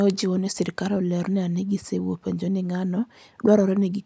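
No technical faults can be heard anywhere in the recording. There is nothing in the audio that needs a time mark or further comment.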